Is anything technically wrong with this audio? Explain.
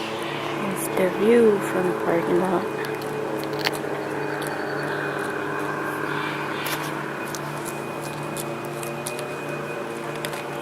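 No, nothing technically wrong can be heard in this audio. There are no faults to point to anywhere in the recording.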